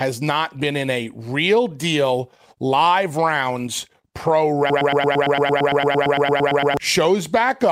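A stall in the player, encoder or stream most likely left it resending the last fragment it held, and this speech clip shows the result as a broken-record loop from 4.70 to 6.77 s. A slice of about 113 ms repeats exactly, back to back, 18 times, giving a rapid stutter in place of the real audio, and whatever should have been heard during those two seconds is lost.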